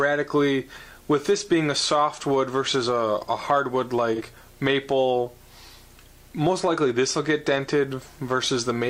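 AAC frame loss with concealment at about 4.15 to 4.22 s: one missing stretch of roughly 43 ms, consistent with a single lost frame, was rebuilt from the previous spectrum, leaving a brief smeared, noisy patch.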